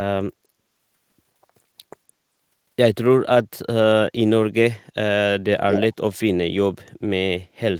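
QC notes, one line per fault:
5.69–5.85 s, echo leak: a brief delayed copy of the speech returns about 230 ms late and only a few decibels below it. The likely cause is a far-end loudspeaker whose echo canceller let some of its microphone pickup through, sending it back.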